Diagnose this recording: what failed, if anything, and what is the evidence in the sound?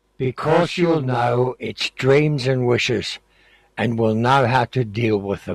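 Channel delay (doubling) at the driver or buffer stage: from the start to about 1.81 s the speech has a second copy trailing it by 40 ms, at the same level. One channel is arriving a buffer late, so the mono sum plays both as a doubled, slappy echo.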